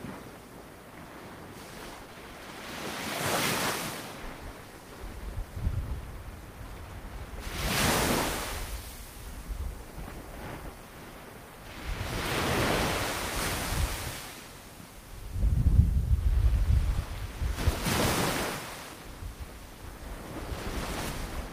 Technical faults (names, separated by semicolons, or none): short stall from a late packet; short concealed packet loss